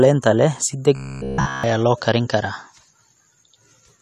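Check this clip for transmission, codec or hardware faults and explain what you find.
One fault stands out: robotic sound from repeated short buffers. It runs from 0.96 to 1.64 s, between "leh si" and "loo karin karaa". Across that whole stretch the voice becomes a rigid, metallic buzz near 67 Hz that still loosely tracks the speech. The likely cause is new audio arriving too slowly. The playback side then loops the last fragment, about 15 ms long, while the real audio is skipped. That loop rate sets the fixed buzz pitch.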